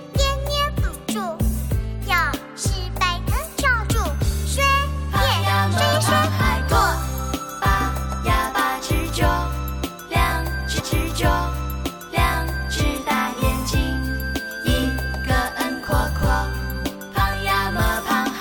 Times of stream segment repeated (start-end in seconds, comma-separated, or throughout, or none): 10.79-12.81